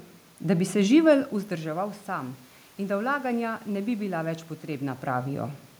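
Nothing in this speech clip points to a system problem: the background room noise is part of the space itself, and the level shifts around one second in and again near four and a half seconds are just the talker moving relative to the microphone.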